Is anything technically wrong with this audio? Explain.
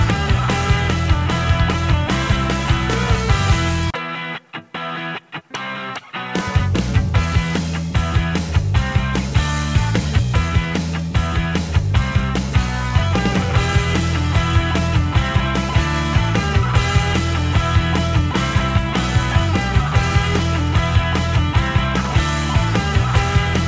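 No, nothing is technically wrong: the audio has come through a call path whose wideband codec stops everything above 8 kHz, which fits G.722 at 64 kbps, and that band limit is expected.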